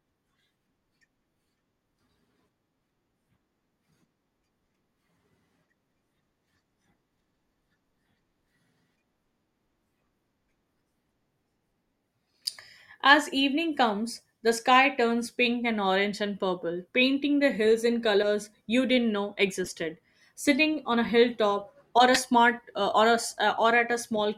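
At 14.12 s there's a quick squeak, then short chirpy bursts at 18.22 to 18.27, 19.65 to 19.71 and 22.14 to 22.20 s, the last one quite loud. That's a corrupt frame decoded: damaged data got played anyway, spraying energy at wrong frequencies.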